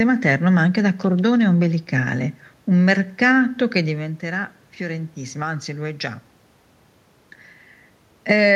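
A speech recording with no technical faults. Room noise sits in the background, and the voice level shifts around 4 s and again near 7.5 s as the talker moves relative to the microphone.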